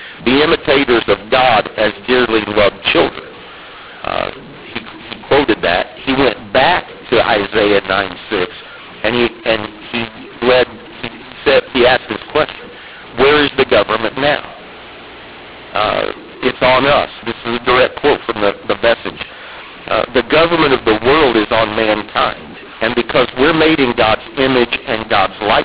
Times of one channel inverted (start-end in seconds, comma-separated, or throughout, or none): none